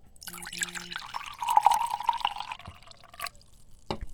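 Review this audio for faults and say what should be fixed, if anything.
At 2.51 to 2.56 s there is a brief glitch lasting about 50 ms, the signature of damaged data in a compressed stream. Some bytes in the encoded stream were lost or corrupted, so the decoder misread those frames, lost sync and had to hunt for the next valid frame header before playback recovered. A plain dropout or buffer underrun gives silence or a click. This artefact instead comes from corrupted frame data being decoded as if it were valid. To prevent it, transfer and store the file with checksums or error-checked transport, and re-fetch or re-encode from an intact source.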